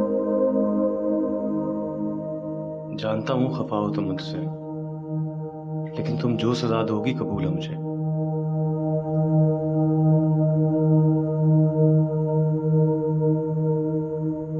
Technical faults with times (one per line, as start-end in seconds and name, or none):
none